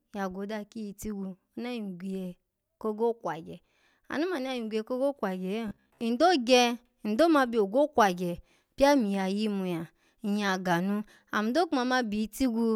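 Robotic sound from repeated short buffers appears from 5.68 to 6.01 s, likely caused by audio arriving too late so a 15 ms slice is looped. About half the sound is repeated, imposing a rigid 66.7 Hz metallic buzz that only loosely tracks the speech.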